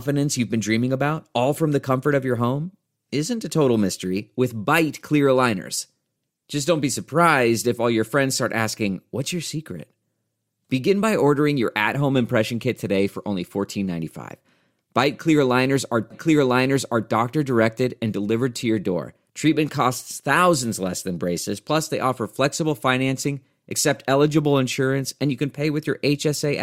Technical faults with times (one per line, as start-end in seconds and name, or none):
16.10-17.10 stream segment repeated